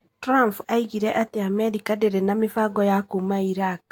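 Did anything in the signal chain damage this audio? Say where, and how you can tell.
Yes, at the codec stage, across the whole speech clip. It sounds swirly, smeared and hollow, with blurred attacks, which points to generation loss, likely from about four lossy re-encodes, each requantising on a shifted frame grid. A spectrogram shows piled-up spectral holes and nothing above 19.1 kHz.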